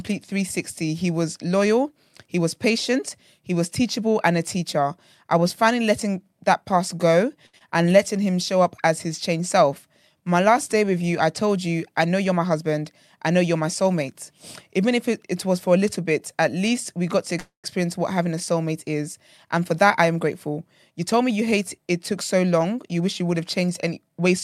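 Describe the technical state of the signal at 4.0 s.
At 4.0 s the speech signal is intact, with no technical fault present at that moment.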